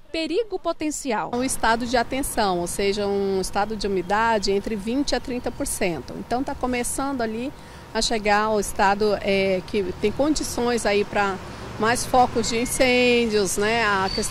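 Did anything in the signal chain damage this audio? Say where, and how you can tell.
Yes, there's hard clipping near the end, from 11.89 to 12.23 s and again from 12.81 to 12.91 s. The peaks hit a ceiling and get sliced flat, which you hear as a gritty crackle on the loud moments. The first stretch is driven about 2 dB past the limit and the second about 5 dB, so that second burst is overdriven harder. Those squared-off tops throw harmonics high up the spectrum, which points to a converter or gain stage being pushed past full scale.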